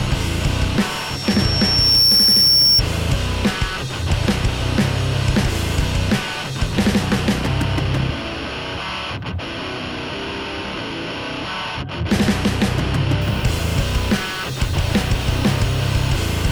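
From 0.90 s to 2.82 s there's a loudspeaker feedback squeal. A mic is hearing its own speaker, and at 5.5 kHz the loop gain tips past one, so that tone swells over about a second into a piercing whistle that ends up louder than the sound itself.

From 13.22 s to the end at 16.52 s, a steady, even hiss comes in with no gritty distortion. That's low bit depth with dither. The hiss level fits something like a 7-bit signal, with dither turning the rounding error into white noise that sits well under the sound.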